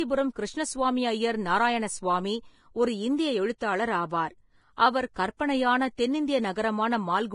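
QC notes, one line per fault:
throughout, Vorbis compression: hissy, grainy treble with nothing above 10.5 kHz. The heavy damage is likely low-bitrate Vorbis, and fits roughly 29 kbps.
3.58–3.61 s, pre-echo: a short hiss, about 28 ms, creeps in just before an attack. The block's quantisation noise smears ahead of the onset and softens it.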